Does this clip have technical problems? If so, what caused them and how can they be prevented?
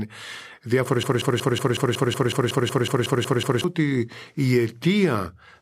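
Yes. A broken-record loop runs from 1.03 s to 3.64 s. The likely cause is a player, encoder or stream that stalled and kept resending the last fragment it had buffered instead of new audio. The result is a 184 ms slice of speech repeating exactly, back to back, 14 times, until normal playback resumes just before "ότι η". Whatever should have played during those 2.6 seconds is gone. To prevent it, make the playback or streaming chain output silence or resynchronise on an underrun rather than replaying stale buffer contents.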